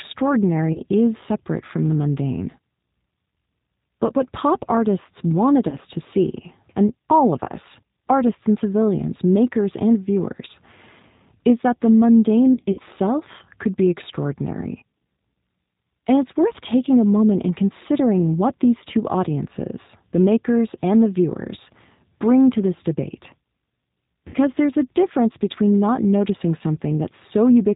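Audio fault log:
throughout: G.729 codec. The speech is G.729A at 8 kbit/s, rebuilt from a vocal tract filter, pitch predictor and sparse pulses, so nothing above 4 kHz survives and the voice sounds plainly rough and synthetic.
0.73–0.80 s, 5.69–5.77 s, 12.54–12.80 s, 24.28–24.36 s: VoIP packet loss concealed by the speech codec. About 30 ms goes missing before "is separate from the", 30 ms between "what pop artists wanted" and "to see and all", 120 ms scattered over 240 ms (longest gap 60 ms) near 12.5 s, and 60 ms before "there's a difference between". The decoder extends its last pitch and filter with falling gain, producing brief fading smears of buzzy tone or coloured noise, and the voice stays weak or distorted afterwards.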